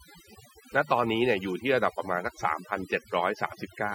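Overdone noise removal runs through the whole speech clip. The noise reduction was set too aggressively, pulling individual frequency bands down whenever they neared its noise estimate. The background drops and breaks up into twinkling specks, and quieter speech detail is stripped.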